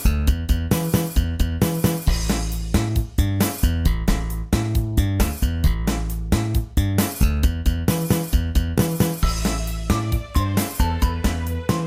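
No technical faults are audible anywhere in the audio.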